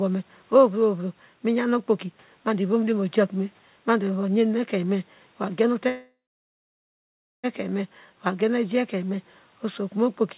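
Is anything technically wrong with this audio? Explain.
Yes. Call audio freeze, 5.88 to 7.46 s: delayed packets likely emptied the jitter buffer, so the sound fades to 1.28 s of silence, then resumes 1.56 s late with nothing lost.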